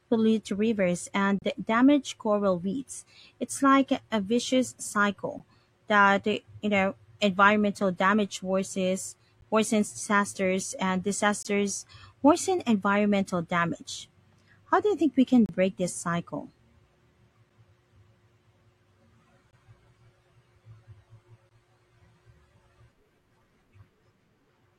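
Speech keeps dropping into hard-edged silent holes from a gap between stream segments: 1.39–1.42 s between "pollute rivers" and "damage coral reefs", 5.39 s, 11.43–11.45 s, 15.46–15.49 s before "break this cycle", 17.5, 19.51 and 21.49 s. Each lasts about 10 to 33 ms and lands on a 2-second segment boundary. The timestamps leave a gap that the player fills with silence, but no audio goes missing.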